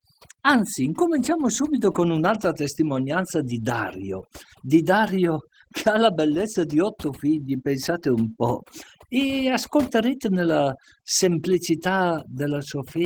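Speech, with overdone noise removal running through the whole clip. The background drops and breaks up into twinkling specks, and quiet parts of the voice were cut away with it. Opus voice compression is also plainly audible throughout. The sound is hoarse and slightly robotic, which fits hybrid-mode coding at around 16 kbps, though content still reaches about 20.3 kHz.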